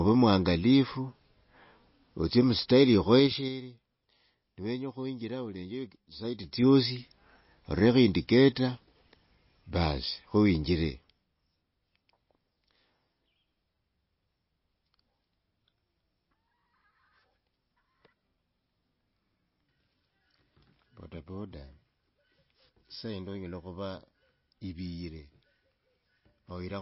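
Across the whole speech clip the sound is dull and watery, with nothing above 5.6 kHz, a swirly, metallic edge on s sounds and smeared consonant attacks. This is likely MP3 compression at a very low bitrate, around 24 kbps. Short of bits, the encoder cut the treble at a fixed point and zeroed weak frequency lines, which flicker on and off from frame to frame and produce the warbling texture.

From 10.84 to 11.31 s a rapid ticking rides on the speech as the level falls by roughly 10 dB. This is zipper noise. The gain moved in unsmoothed 3 dB steps, about ten a second, and each jump left a small click in the waveform.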